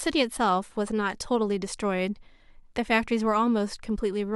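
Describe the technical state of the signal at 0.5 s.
At 0.51 s the stream most likely lost a handful of samples, a tiny fraction of a millisecond, so the waveform skips straight from one value to a later one instead of moving smoothly between them. The gap is far too brief to remove any audible sound; what it leaves is a single sharp click, seen as a thin vertical line running up the spectrum. This is a case of dropped samples.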